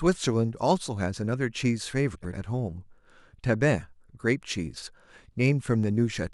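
Frames out of order at 2.15 to 2.34 s and again at 4.77 to 4.87 s: two adjacent blocks of the speech, about 93 ms and 46 ms each, play swapped, giving a brief garbled flutter, which fits runs of four and two frames.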